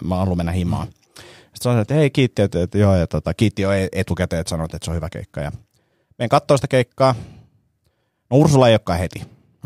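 A speech clip with clock slip clicks from 0.25 to 9.58 s. Faint ticks repeat about every 0.15 s, around seventy in all. Each is a single-sample jump. The likely cause is two unsynchronised clocks differing by roughly 150 ppm.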